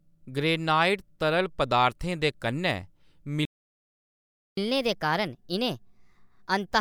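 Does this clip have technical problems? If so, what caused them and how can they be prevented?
Yes. There's a playback stall from 3.45 to 4.57 s: the speech just cuts out for about 1.1 s mid-flow, then picks up again. The likely cause is the player running dry or its thread getting blocked. A bigger jitter buffer and keeping the audio thread free of blocking work would prevent it.

Right after that comes catch-up at higher speed, from 4.57 s to the end. The player runs its backlog at 1.25x, so the speech sounds rushed and lifts by roughly four semitones. Catching up with pitch-preserving time-stretching, or just dropping the backlog, would avoid that chipmunk effect.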